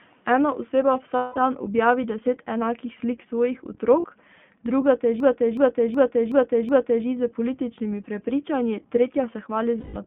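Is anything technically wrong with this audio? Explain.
Yes, there are three kinds of fault in this speech clip.

The iLBC codec affects the whole clip. The band is limited to about 150 Hz to 3.4 kHz, which is consistent with the 15.2 kbps, 20 ms frame mode. Each frame's excitation is coded independently, so the codec damage is plainly audible as a rough, slightly synthetic texture with no high-frequency content.

Lost iLBC frames occur at 1.16 to 1.38 s (200 ms), 4.00 to 4.06 s (40 ms) and 9.80 to 9.97 s (160 ms). The decoder conceals each gap by repeating the last pitch cycle mixed with noise, which gives a held, buzzy vowel. The longer gaps fade, and clean speech returns almost immediately after each one.

A system hang loop runs from 5.20 to 7.06 s. The host stalled while the audio hardware kept replaying one ring buffer, so a 371.52 ms fragment repeats five times at 2.69 Hz. This fits a 16384-sample buffer. 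The result is like a skipping record, with essentially no underlying audio dropped.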